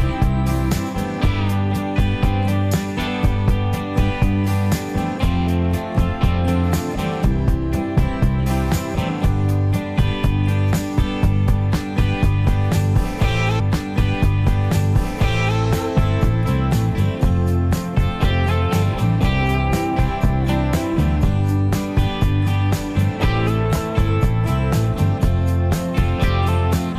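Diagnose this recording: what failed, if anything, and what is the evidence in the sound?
Stream segment repeated, from 13.59 s to 15.58 s. At 13.59 s the audio jumps back, and about 2.0 s of material that has already played is heard again before the programme continues, making the clip that much longer. The fault sits at the network and playback stage: the player fetched or queued the same stream segment twice and rendered both copies in sequence. The small discontinuity at the jump back marks the join between the two copies.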